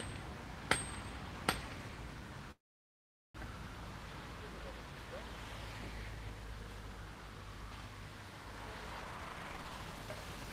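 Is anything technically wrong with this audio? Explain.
Yes, there are two faults.

From 2.51 to 3.36 s there is a call audio freeze. The sound breaks into a brief fading continuation and then about 0.79 s of silence before resuming where it left off. Nothing is lost, but about 0.83 s of delay is inserted. This is likely caused by the jitter buffer running dry while packets were held up.

From 9.02 to 10.51 s there is a jitter buffer speed-up. The audio plays at about 152% speed with its pitch unchanged, so it sounds rushed. The receiver repeatedly cut out short pitch-period slices, roughly 0.7 s in total, to drain a backlog of buffered audio.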